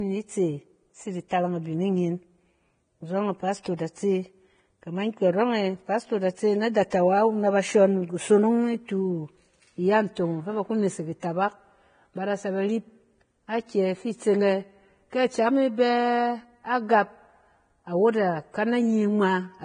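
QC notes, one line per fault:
Throughout: Vorbis compression, likely. Heavy hiss and grain, nothing above 9.7 kHz, roughened treble, which fits a low bitrate around 23 kbps.
3.63–3.65 s and 6.90 s: pre-echo. About 20 ms of hiss creeps in just before sharp attacks, since the codec spreads block noise ahead, softening them.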